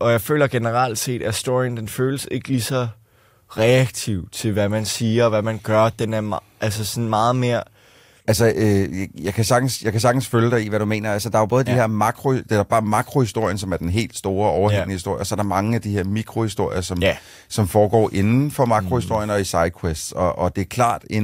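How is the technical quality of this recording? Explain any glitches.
One fault stands out in this speech recording. Drift correction step, 10.62 to 12.07 s, right after "jeg kan sagtens følge": software matching two clocks likely stepped the playback rate up 5.65% to rebalance its buffer. Speed and pitch rise together by 95 cents, nearly a semitone, then snap back before "det er bare makrohistorien".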